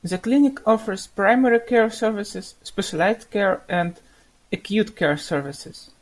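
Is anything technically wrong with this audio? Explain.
No, nothing technically wrong stood out on listening to this speech recording.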